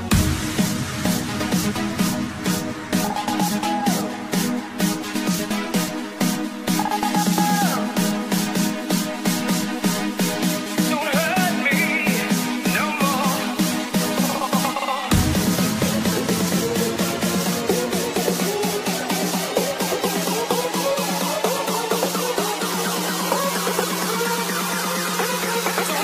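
No technical faults are audible.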